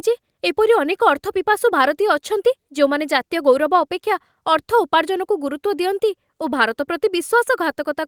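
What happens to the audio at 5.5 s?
Nothing goes wrong at 5.5 s; the speech carries on intact through that moment, with no dropout, click or distortion.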